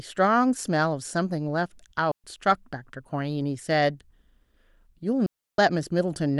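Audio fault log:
2.11–2.24 s and 5.26–5.58 s, digital wireless dropout: clean near-silent holes of 125 ms and 320 ms, no noise burst, where the receiver muted after losing too much data.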